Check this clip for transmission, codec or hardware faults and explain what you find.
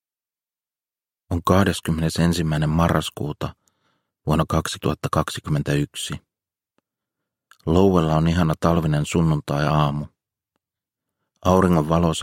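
Nothing here points to a transmission, codec or hardware problem; the sound holds together steadily all the way along with nothing breaking in or dropping out.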